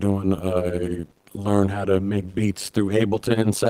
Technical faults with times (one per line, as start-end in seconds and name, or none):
0.00-3.69 overlap-add ripple
0.85-1.43 repeated packet loss (robotic sound)
2.85-2.91 lost packet rebuilt from error correction